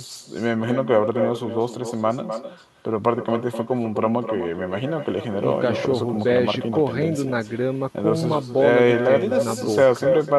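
From start to finish the speech carries an echo with no canceller: the far end is playing the call over a loudspeaker, its microphone captures that playback, and nothing subtracts it before it returns across the network. Each phrase is followed, roughly a third of a second later, by a copy about 8 dB quieter that sounds thinner. On a waveform every burst has a smaller trailing duplicate; a spectrogram shows each syllable's pattern repeated, fainter, just to its right.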